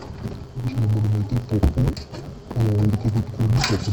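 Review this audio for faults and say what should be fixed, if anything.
The whole clip suffers from interleaved audio read as planar. The sound is dull and robotic, with a steady buzz at about 93.8 Hz and no clear octave drop. Each 10.67 ms block of alternating left and right samples was split in half. The first half went to the left channel and the second to the right. That fits a 512-sample block. Each half plays at half speed, so the pace holds but the texture breaks. To prevent it, match the reader's layout flag to the source's interleaved format.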